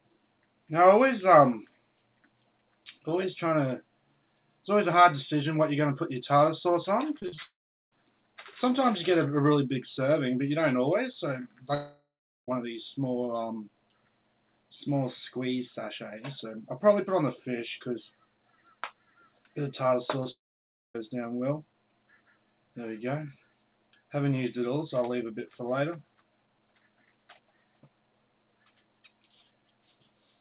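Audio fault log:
7.17–7.38 s, repeated packet loss (robotic sound): seven quick holes in about a fifth of a second, the longest about 36 ms. About half the stretch is patched by repeating the last sound, so it comes out choppy, with bits missing.
7.42–7.92 s, 11.74–12.48 s and 20.31–20.95 s, long network dropout: each time the last sound is stretched into a fading buzz or hiss, then goes quiet for roughly 0.4, 0.43 and 0.58 s. The audio picks up later with that chunk gone, most likely because nothing arrived over the network.
20.23–20.26 s, short concealed packet loss: a tiny hole of about 10 ms got filled by continuing the previous sound, giving a brief smear or wobble just before the third dropout. The band tops out at 4 kHz, as expected on this telephone-grade G.711 link.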